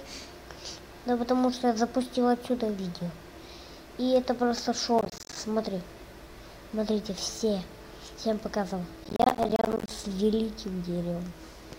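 Processor overload crackle appears from 4.99 to 5.36 s and again from 9.04 to 9.90 s. The processor misses its deadlines for buffers of about 10 ms, roughly 20 times in the first stretch and 40 in the second. Each miss drops a short silent gap. The hard-edged gaps merge into gritty crackle.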